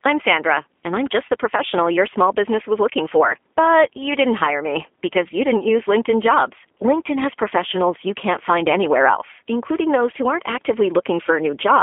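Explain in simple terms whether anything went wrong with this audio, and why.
Yes, something went wrong. The speech passed through the G.729 codec, a phone-call compressor that doesn't keep the sound itself. It keeps a rough model of the voice and rebuilds speech from it on the other end. From start to finish the speech sounds plainly rough and slightly synthetic, like a cheap internet call. It is also thin and boxy, because nothing above about 3.6 kHz survives and the deepest tones below roughly 250 Hz are cut too.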